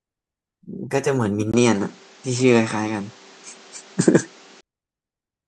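The input was likely switched to a poorer device at 1.52 s, staying there until 4.63 s. After a 20 ms gap, the speech turns duller with nothing above 8.4 kHz, shifts level by around 5 dB, and gains new background noise roughly 30 dB down.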